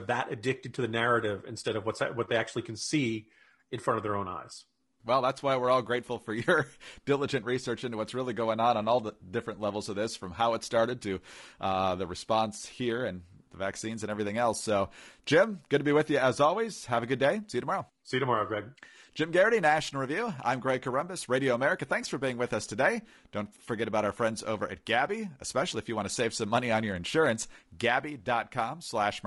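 From start to finish the speech sounds rough and grainy, with noise filling the gaps between pitch harmonics. The likely cause is low-delay AAC compression: AAC-ELD's short frames resolve harmonics poorly, and the plainly audible damage fits a bitrate around 32 kbps.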